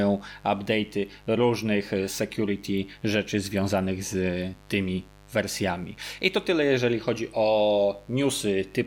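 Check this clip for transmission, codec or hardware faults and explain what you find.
Mains buzz runs through the whole speech clip, start to finish. The supply here is 50 Hz: some switching element or poorly shielded line couples sharp spikes into the audio path twice per cycle, so the interference is a dense stack of harmonics built on 50 Hz rather than a clean hum. It sits steady under the speech at roughly 25 dB below it, heard as a constant raspy, edgy buzz that persists through pauses as well as talking.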